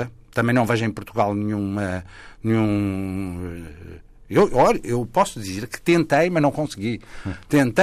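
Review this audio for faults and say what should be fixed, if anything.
Hard clipping appears five times in this speech. The peaks are pushed past what a stage in the chain can pass, so their tops are cut flat. That adds harsh harmonics high in the spectrum. It is mild at 0.38 to 0.73 s, about 2 dB over. It is harsher at 4.37 to 4.71 s, 5.17 to 5.22 s and 7.54 s to the end, about 6 dB over. At 5.89 to 6.47 s it is about 3 dB over. Lower the input gain, or add a limiter before the overloading stage.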